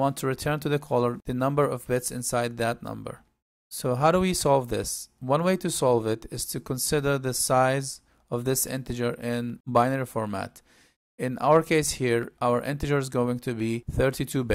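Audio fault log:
1.30–13.6 s, clock drift buffer slips: about ten clicks recur every 1.37 s while sound is present. Two independently clocked devices likely disagree by roughly 150 ppm, forcing a few samples to be dropped or repeated each time. The strict regularity rules out random packet-loss glitches.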